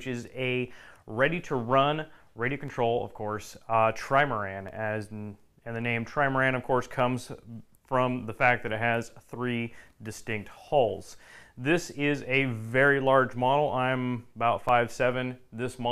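From 0.68 s to 14.69 s, periodic USB or driver dropouts recur every 2.0 s. Each drops about a millisecond to silence, heard as a regular tick while there is signal.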